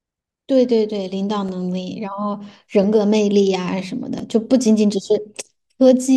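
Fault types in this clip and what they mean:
Repeated buffer: new audio arrived late, so the device replayed its last block once. In this speech each repeat is very short and is heard as a click at 1.49, 2.84 and 4.19 s, which fits a 5 ms buffer. A sliver of sound is lost each time.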